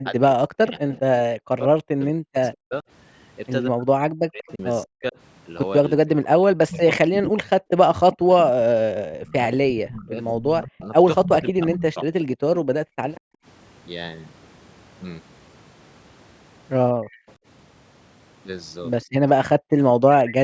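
Speech suppressed in double talk runs from 0.0 to 13.43 s, with about seven seconds of the voice dipping by as much as roughly 40 dB, and again from 16.99 to 20.01 s in brief dips. Both sides were likely talking at once, so the echo canceller pulled the whole signal down. Echo leak appears from 0.05 to 13.2 s and from 17.09 to 20.32 s: a copy of the voice trailing 187 ms behind, about 10 dB below the speech at first and about 20 dB below later, most likely loudspeaker sound the canceller failed to remove. Background gated by the echo canceller happens at 12.85 to 12.98 s (about 35 dB) and at 19.58 to 19.7 s (about 40 dB), where the room sound briefly drops out while the canceller clamps the microphone. The call's microphone processing leaves nothing above 8 kHz.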